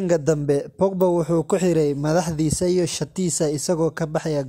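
At 1.01 s, just before "wuxuu ku xidhay madaxdiisa", a single sharp snap of about -20 dBFS sits on top of the speech: an electrical switching spike, likely a nearby switch arcing into the line. Unlike a dropout click, the speech underneath continues without a gap.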